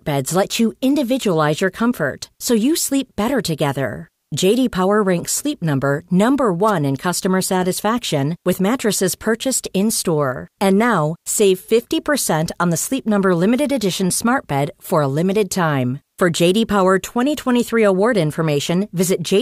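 A short swish of static cuts across the speech from 6.67 to 6.71 s, just before "in customer satisfaction with". This is a wireless microphone noise hit: the FM radio link briefly faded as reflected signals cancelled, letting receiver noise rise up over the voice for about 40 ms.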